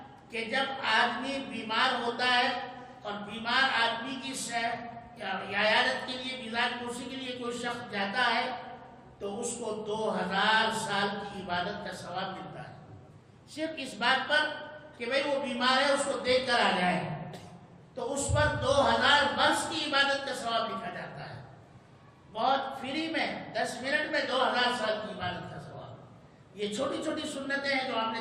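No technical faults are audible anywhere in the recording.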